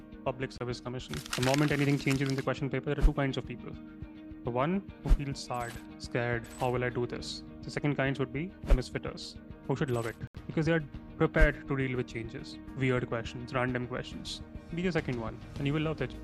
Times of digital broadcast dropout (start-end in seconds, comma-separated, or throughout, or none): 0.58-0.61, 10.27-10.35